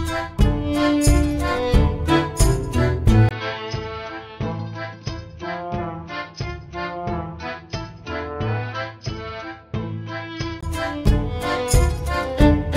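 Input switched to a poorer device, from 3.29 s to 10.63 s: after a 20 ms gap, the sound turns dull and boxy, losing everything above 6.2 kHz, drops roughly 10 dB in level, and gains a faint new noise floor, likely from a change to a narrower-band microphone.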